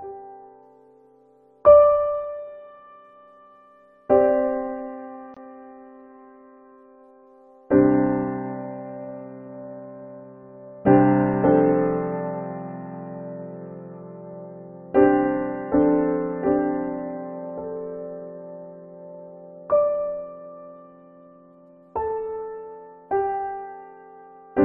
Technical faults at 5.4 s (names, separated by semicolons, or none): corrupt frame muted